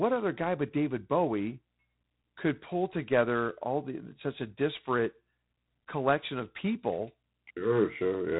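Speech runs through G.726 ADPCM coding for its whole length, with nothing above about 3.9 kHz and a harsh, rasping hiss that rises and falls with the voice's level. That level-following roughness comes from coarse difference coding against an adaptive prediction, and its plainly audible strength fits 24 kbit/s. Unlike the swirling, watery artefacts of a low-bitrate perceptual codec, the damage here is grainy noise riding directly on the speech.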